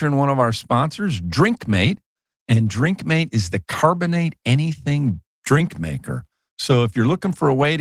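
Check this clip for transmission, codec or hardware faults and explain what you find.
I find no transmission, codec or hardware faults anywhere in this speech recording.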